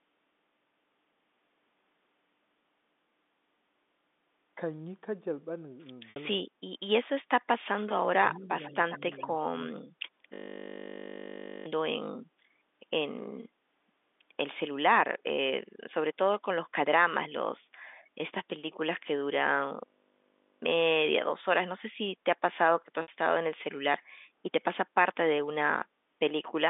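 At 6.10 s a gap of about 60 ms is bridged by packet loss with pitch repetition. The receiver lost a stretch of data, which fits three 20 ms packets, and filled it by repeating the last pitch period while fading it down. Because the loss is short, the result is a brief held, slightly buzzy tone rather than silence, and the speech then resumes through a quick cross-fade.

Between 8.30 and 9.23 s a faint delayed copy of the speech appears, trailing the original by 130 ms. It is most likely echo leak: a loudspeaker at one end fed its microphone, and the echo canceller there did not fully remove the pickup. The copy comes in scraps at 8.30 s and 8.65 s, each about 70 ms long and well below the main speech. A longer, stronger stretch follows from 8.91 to 9.23 s.

From 9.75 to 9.83 s the speech dips sharply, by roughly 15 dB at its deepest, for well under a tenth of a second. The likely cause is speech suppressed in double talk. 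With both ends active, the echo canceller could not tell the local talker from loudspeaker echo, so it attenuated everything briefly and took the talker down with it.

At 10.34 s a system hang loop sets in and runs to 11.66 s. While the host or driver stalled, the audio hardware kept replaying the same 20 ms of its ring buffer, 66 times in a row. That produces a steady 50 Hz buzz in place of the speech, and roughly 1.5 s of real audio is lost. The same fault returns from 19.86 to 20.62 s with the same 20 ms loop and buzz, this time 38 repeats, costing about 0.7 s of audio.

A second 60 ms packet loss with pitch repetition occurs at 23.02 s. Like the first, it sounds like a short buzzy hold before the speech picks up again. All of this sits inside a narrow telephone band, roughly 200 Hz to 3.6 kHz, as expected from G.711 coding.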